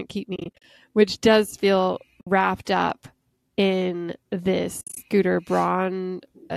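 Lost AAC frames, muted by the decoder (AAC frame loss with muting), leave soft-faded holes. From 0.36 to 0.64 s, just before "which does feel", short gaps totalling 170 ms are scattered across the span, the longest about 40 ms. A single 60 ms hole follows at 2.21 s, between "which does feel" and "up in". From 4.81 to 4.97 s, 120 ms drops out, including one run near 70 ms. The light coding damage throughout likely comes from low-delay AAC coding.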